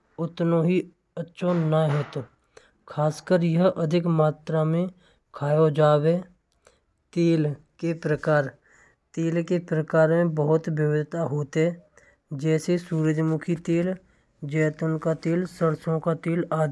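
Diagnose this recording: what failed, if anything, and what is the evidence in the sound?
Nothing in the speech recording points to a failure at any stage of the chain, from capture and conversion through buffering and transport to storage and playback.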